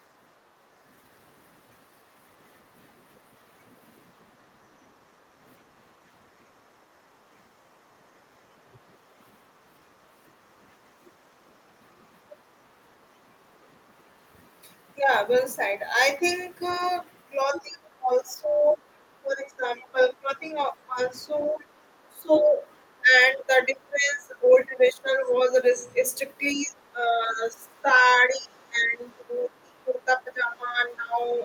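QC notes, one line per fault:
0.43 to 0.53 s, background gated by the echo canceller: the room sound behind the talker dips by about 6 dB for roughly a twentieth of a second, then returns. The canceller clamped the microphone while its loudspeaker was playing and released it moments later. Only the background ambience changes, and the dip is brief and shallow. That separates it from the later double-talk suppression, which takes the talker's own speech down far deeper and for seconds.
15.33 to 15.37 s, 16.30 to 16.34 s, 17.55 to 17.60 s, 19.82 to 20.05 s and 24.47 to 24.84 s, other side's voice leaking through: faint scraps of a second voice, sitting roughly 15 to 30 dB under the main speech, the loudest at 17.55 s. These are likely loudspeaker echo that the canceller failed to remove. Here something is added to the signal rather than taken away, which distinguishes it from the gating and suppression faults.
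17.45 to 26.01 s and 26.54 to 31.21 s, speech suppressed in double talk: the talker's speech sinks by as much as about 20 dB in the first span and about 15 dB in the second, in stretches totalling roughly 5 s and 4 s. It likely comes from both sides talking at once, leaving the canceller unable to separate talker from echo and turning both down. Unlike the 0.43 s gating, the speech itself is lost, overlapping the leaked-voice bursts at 17.55, 19.82 and 24.47 s.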